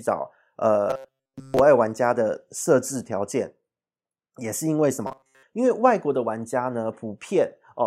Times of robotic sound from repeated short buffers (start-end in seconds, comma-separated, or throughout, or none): 0.90-1.59, 5.07-5.43